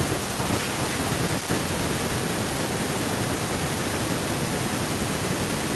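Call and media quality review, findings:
Echo leak, 0.59 s to end of clip: delayed copy of the speech returning 1.03 s late, about 10 dB under direct speech. Likely far-end loudspeaker pickup not fully cancelled by that side's echo canceller, residual sent back.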